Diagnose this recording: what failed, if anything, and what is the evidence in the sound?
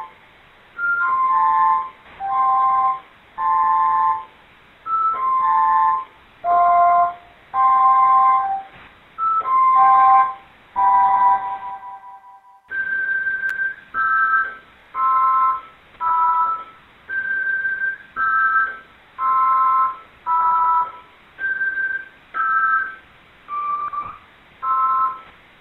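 CD skip at 13.50 s, a playback-stage fault in the disc transport. The sound cuts to silence for about 10 ms, heard as a small tick, and then resumes from a different point in the material rather than continuing where it left off. The laser pickup lost its place on the disc's spiral track and landed on another turn, so the player muted briefly while relocking and carried on from the wrong position.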